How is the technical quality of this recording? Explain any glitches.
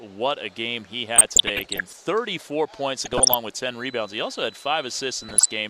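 The technical quality suffers from DAB burbling in three bursts. They fall at 1.16 to 2.01 s, 3.03 to 3.34 s and 5.16 to 5.48 s. Weak reception lets bit errors slip past error correction. Corrupted scale factors make sub-bands jump in level for up to a frame. The result is short noise blips and level jumps over the sound.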